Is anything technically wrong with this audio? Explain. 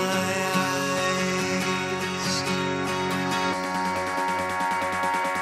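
No, nothing technically wrong stands out here; it's a sound recording with no faults to point to.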